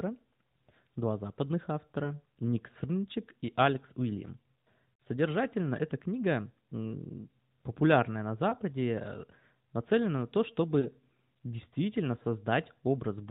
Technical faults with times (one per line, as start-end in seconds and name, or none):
2.04-2.14 lost AMR speech frames
5.00 lost AMR speech frames
8.50-8.54 lost AMR speech frames
10.80-10.89 lost AMR speech frames